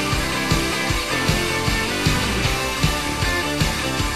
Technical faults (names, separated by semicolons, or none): DAB burbling